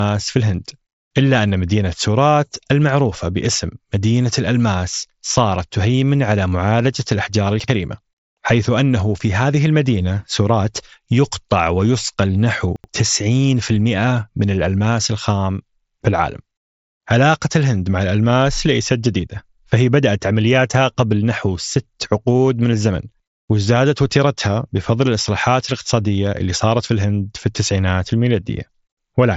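A speech recording with two chunks-out-of-order events. At 7.60 to 7.68 s a 40 ms block plays one chunk late, and at 12.76 to 12.88 s another 40 ms block lands two chunks late. Nothing is lost; the audio is simply reshuffled, so each spot sounds jumbled, with hard joins where blocks meet out of sequence. The band stops near 7.7 kHz, consistent with an mSBC Bluetooth headset link.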